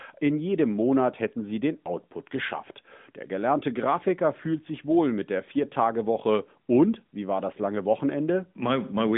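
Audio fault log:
No faults heard in this clip.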